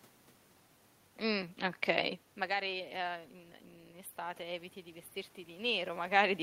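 From 2.66 s to 6.04 s the automatic gain rises. Shortly after the talker moves back from the microphone around 2 s, the input level falls by about 16 dB, and the gain control responds by slowly lifting its gain, about 4 dB over more than three seconds. Because the boost applies to everything the microphone picks up, the voice and the room noise behind it swell together, and the background gets steadily louder as the speech recovers only part of its lost level.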